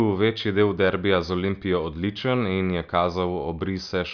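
Speech recording with no audible technical faults anywhere in it.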